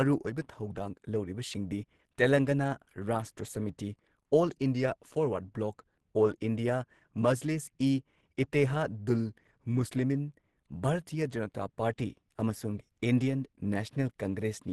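Throughout the clip the speech sounds hoarse and somewhat muffled, with a rough, grainy texture and nothing above 12.1 kHz. This is Opus compression, likely in its hybrid speech mode at a rate that fits about 16 kbps, where starved bands are filled with noise.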